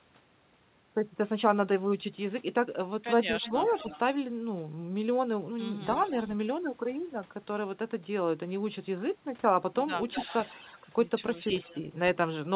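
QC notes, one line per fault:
3.42, 3.67, 5.84, 10.11, 10.78 and 11.43 s: echo leak. Delayed copies trail the sound by about 250 ms, about 10 to 40 dB down, likely from loudspeaker pickup the echo canceller failed to remove.
3.51 to 3.75 s: speech suppressed in double talk. The talker dips by about 10 dB over roughly 200 ms while echo overlaps, likely the canceller turning down both signals.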